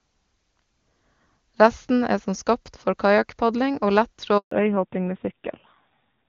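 At 4.37 s a handover gap cuts the speech for 140 ms, until 4.51 s. No frames arrive while the call switches networks, so the sound drops to silence. From 4.51 s to the end, fallback to narrowband removes everything above 4 kHz, and the speech turns dull and rough, consistent with a narrowband AMR codec around 7.4 kbit/s.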